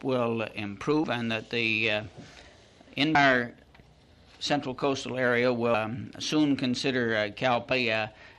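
Compressed frames are skipped at 1.03, 3.15, 5.74 and 7.71 s. Each time the audio jumps ahead roughly 0.1 to 0.3 s in steps that fit a 24 ms frame, leaving a waveform discontinuity and a vertical mark on the spectrogram.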